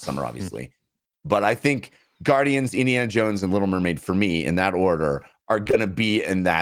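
At 5.63, 5.67 and 5.71 s, just after "in that order are", three back-to-back short concealed packet losses occur; the receiver extrapolates missing audio, producing a brief smeared wobble.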